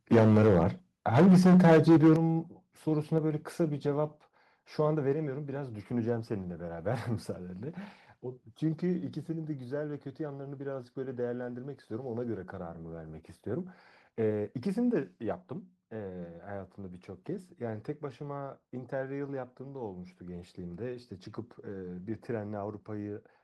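Right from the start, between 0.12 and 0.67 s, the speech has that harsh, crackly edge of microphone overload. The input is likely set far too hot, running about 11 dB past what the converter can take, so the tops of the waveform get sliced flat on something like 15 percent of the samples. It comes back from 1.14 to 2.14 s, about 10 dB over, with roughly a fifth of the samples squared off and the loud syllables sounding gritty.

Alongside that, you can hear the microphone volume stepped down in sudden jumps, likely the call software reacting to the clipping by pulling the device's input gain. The first comes at 0.15 s, a small drop of about 2 dB right inside the first overload. Then at 2.16 s, just as the second overloaded stretch ends, the speech and the room noise both fall by about 8 dB at once. Two more steps of about 4 dB each land at 3.18 s and 5.13 s, so the level keeps dropping over the first five seconds.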